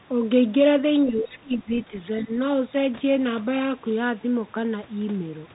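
From the start the speech carries the Bluetooth CVSD headset codec, which fits a 64 kbit/s link coding one bit per sample. Nothing above 3.8 kHz survives, and the step-size tracking audibly lags loud high content, so sibilants turn scratchy over a granular hiss.

From 1.05 to 1.7 s, and again briefly from 2.22 to 2.3 s, the talker's level dips, by about 15 dB and then about 10 dB. This is likely speech suppressed in double talk, where an echo canceller could not separate the talker from the overlapping far-end loudspeaker echo and attenuated both.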